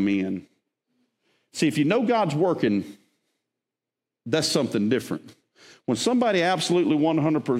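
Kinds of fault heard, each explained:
Nothing stood out on listening to this speech.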